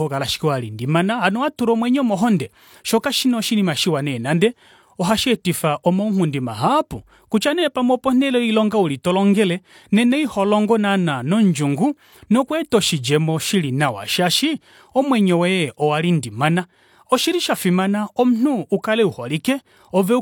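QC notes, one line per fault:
18.82 s, pre-echo: right after "shafimana omunhu" a hiss creeps in just ahead of a sharp attack, spread over about 15 ms, so the onset loses its snap and comes across smeared. What's going on is that the codec spreads its quantisation noise across the whole transform block, and the noise level it picked for the loud hit ends up filling the quiet stretch before it too. Short.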